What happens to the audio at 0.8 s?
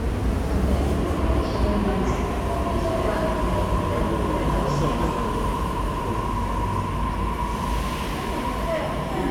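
At 0.8 s the audio plays through intact, with no dropout, click, distortion or other fault at that moment.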